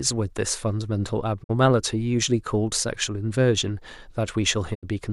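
At 1.42 to 1.51 s and again at 4.73 to 4.85 s the speech fades out over about 20 ms into a digital broadcast dropout, as the receiver mutes on failed frames. These show as flat waveform gaps and blank vertical bands on a spectrogram, with roughly 50 and 70 ms of programme lost.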